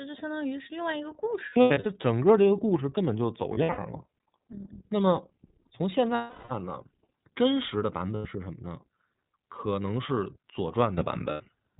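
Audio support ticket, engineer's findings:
iLBC codec, full clip: nothing above 4 kHz. Speech clear but rough and slightly synthetic, damage plainly audible. Narrowband VoIP codec coding each frame's excitation independently. Sound fits the 30 ms frame, 13.33 kbps mode.

Lost iLBC frames at 1.5–1.86 s, 3.53–3.79 s, 6.15–6.52 s, 8.16–8.26 s and 11.31–11.41 s: gaps filled with a held, buzzy or breathy vowel-like tone. Decoder concealment repeats the last pitch cycle mixed with noise. First two losses scattered, longest runs around 100 ms and 70 ms. Recovery immediate after each gap.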